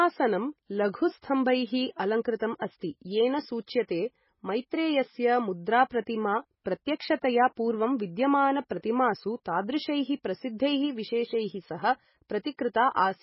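The whole recording sounds dull and watery, with nothing above 5.6 kHz, swirly burbling on the s sounds, and soft smeared consonant attacks. That's heavy damage, likely from MP3 compression at a very starved bitrate, which fits something around 16 kbps, where the encoder lops off treble and drops weak frequency lines frame by frame.

At 6.64 s there's pre-echo. Right before "प्रत्यक्षतया पूर्वं विद्यमानप्रतिमासु तादृशैः", a sharp onset lands late in a codec block, so the noise budgeted for the loud part smears back into the quiet gap ahead of it. You hear a brief hiss of about 16 ms just before the attack, which then lands a bit blurred.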